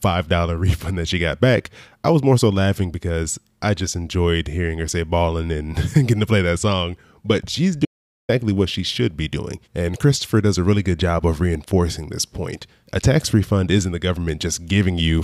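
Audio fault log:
7.85–8.29 s, audio dropout to silence: right after "that song but she's" the speech cuts off mid-flow and the track falls to silence for about 0.44 s, with no room tone or background hiss underneath, before resuming abruptly at "what she should be". The dead-flat gap suggests the input signal was lost, likely through a momentary disconnect, link failure or mute, while the recorder kept writing silence, so whatever was said in that interval is gone.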